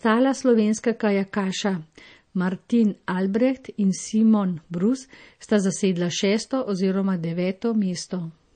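From start to finish the speech carries plainly audible MP3 compression damage, likely from an encoder starved of bits. Nothing comes through above 9 kHz, so the top end sounds dull and clipped off, and the weaker detail underneath has that watery, swirly quality you get when faint frequency lines drop in and out between frames. The s sounds pick up metallic chirps and sharp onsets smear, which fits a low bitrate in the region of 32 kbps.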